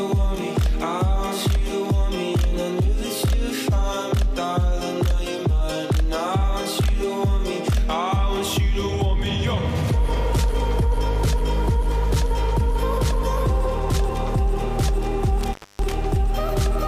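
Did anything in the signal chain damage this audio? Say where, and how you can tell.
Yes, in the analogue wiring. Near the end, between 15.41 and 15.92 s, the sound crackles and then drops out, with the signal gone for about 254 ms before it crackles back in. This is an intermittent contact: a loose plug or cable conductor briefly lost its connection, so the signal path opened for that quarter second. The scratchy edges come from the contact making and breaking unevenly as it separated and reseated.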